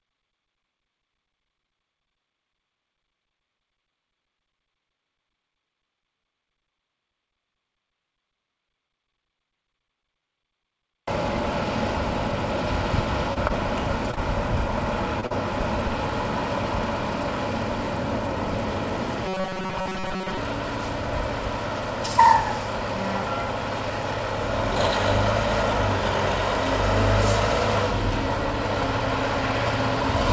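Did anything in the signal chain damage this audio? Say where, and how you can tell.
Yes. At 13.34 to 13.38 s a sound is held about 22 ms too long, with a slight buzz or dip. This is a short stall from a late packet: the network delivered late, the jitter buffer ran dry, and the receiver stretched audio until the packet arrived.

Brief smears at 13.48, 14.11, 14.15, 15.21 and 15.26 s are short concealed packet loss. About 20 ms never arrived each time, and the decoder filled each gap by extending the preceding sound.

From 19.26 to 20.37 s the sound turns into a rigid metallic buzz at 188 Hz. That is robotic sound, likely from repeated short buffers about 5.3 ms long replacing most of the real audio.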